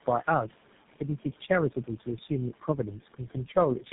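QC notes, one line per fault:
Throughout: noise suppressor artifacts. The background, which sits about 16 dB below the speech, is pulled down by about 12 dB in the gaps and swells back up under each phrase. That pumping is the suppressor working band by band, frame by frame. On a spectrogram, the noise floor shows as patchy, blotchy cells between phrases, and the waveform's quiet stretches dip lower than the noise beside the speech.
Throughout: tandem speech coding. The speech sounds rough, muffled and warbly, worse than any single phone link would make it. Each codec stage re-encodes the damage left by the one before, and the result points to about three low-rate speech coders in series, ending in something like GSM full rate. A spectrogram shows nothing above 3.8 kHz, with smeared, grainy harmonics and formants. The waveform looks coarse rather than clean.
3.02–3.56 s: speech cut by the noise suppressor. 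Within this span, about a tenth of a second of speech is turned down by up to about 12 dB along with the background, so soft sounds come out swallowed and faint. The suppressor mistook low-level speech energy for steady noise and attenuated it. On the waveform, the envelope sags sharply in places. On a spectrogram, weak consonant or tail energy is missing or faded to the level of the noise floor.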